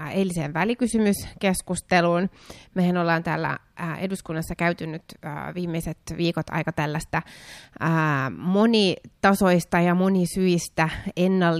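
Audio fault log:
Nothing to log here, since the speech comes through without any fault worth noting.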